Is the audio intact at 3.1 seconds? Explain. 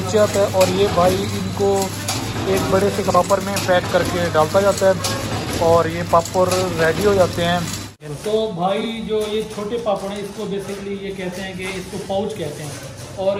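No. From 3.05 to 3.15 s the frames are out of order: two neighbouring runs of about 46.4 ms each, which fits two frames per run, were decoded in swapped order. That stretch plays with its halves exchanged, giving a brief garbled flutter. Unlike a dropout or skip, nothing is missing or repeated, and no time is lost.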